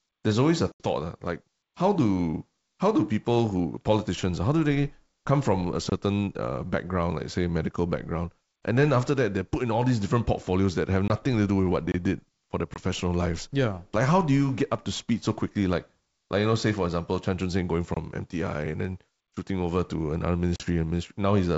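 Speech over a G.722 wideband call shows two faults. Packet loss on an ADPCM call drops audio at 0.72 s (80 ms, between "there's always a" and "uh like how do"), 11.08 s and 12.74 s (20 ms each), and 20.56 s (40 ms, after "shooting over to another"), leaving hard-edged silences followed by slightly distorted speech. A gap between chunks, left between 6 s blocks, inserts about 23 ms of silence at 5.90, 11.92 (between "to do with what" and "did for their") and 17.94 s.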